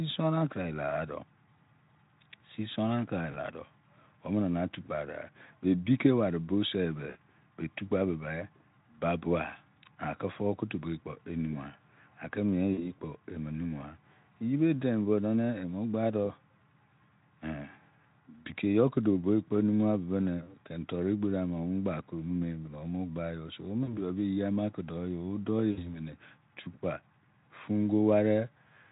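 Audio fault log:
3.31–3.38, 7.09–7.18 (between "boo se be" and "be tukpa"), 12.74–12.94, 20.43–20.53 (before "keni toru"), 23.83–24.00 (after "so wo"), 25.72–25.98: VoIP packet loss concealed by the speech codec. Gaps of 20 to 60 ms are filled by extrapolating the last pitch and filter at falling gain, giving a brief buzzy or noisy, fading smear that recovers slowly once packets return.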